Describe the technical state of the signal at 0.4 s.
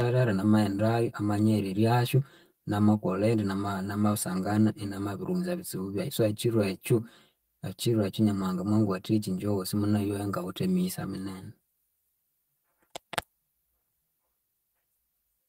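At 0.4 s the speech already has channel delay comb filtering, and it stays that way for the whole clip. One channel lags the other by around 5 ms, so summing to mono cancels evenly spaced frequencies from roughly 100 Hz upward. That gives a hollow, phasey tone.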